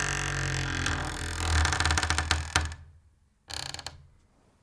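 No technical faults can be heard anywhere in the audio; the signal stays continuous and intact throughout.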